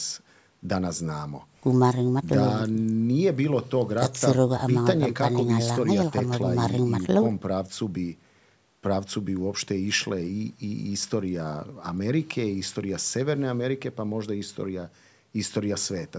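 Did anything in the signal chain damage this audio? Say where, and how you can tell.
No, nothing in the chain from capture to playback has damaged this speech. The call's microphone processing can be heard working as designed, trimming the lowest bass and leaving nothing above 8 kHz.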